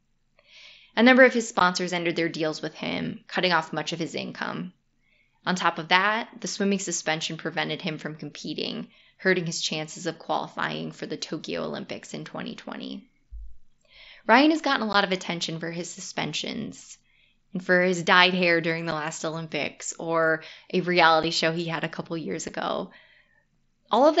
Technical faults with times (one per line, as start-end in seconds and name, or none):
1.59 unconcealed Bluetooth headset packet loss
14.93 unconcealed Bluetooth headset packet loss
18.91 unconcealed Bluetooth headset packet loss
21.23 unconcealed Bluetooth headset packet loss
22.48 unconcealed Bluetooth headset packet loss